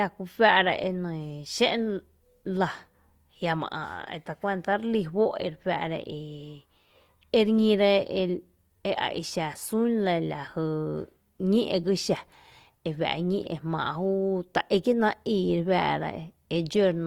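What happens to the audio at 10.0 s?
At 10.0 s the speech has the grainy, rough texture heard across the whole clip: harmonics sound noisy but without swirling gaps, and content reaches about 20.2 kHz. This is likely Opus compression in CELT mode, filling starved bands with folded spectrum or noise, consistent with about 24 kbps.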